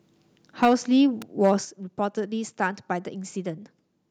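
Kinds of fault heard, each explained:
Microphone overload: At 0.62 to 0.74 s and 1.44 to 1.52 s the loudest speech peaks are flattened, about 6 dB and then about 3 dB past the converter's limit, giving a harsh, crackling edge. This is likely input gain set too high for the converter.
Microphone volume stepped down: At 0.65 s and again at 1.65 s the speech and background fall abruptly, by about 4 dB and then about 6 dB. This likely comes from call software cutting the device's input volume after detecting clipped peaks.
Electrical switching spike: At 1.22 s a sharp snap or tight cluster of clicks, only a few milliseconds long, sits on top of the speech. The likely cause is an arc from a nearby switch, motor or static discharge being coupled into the audio line.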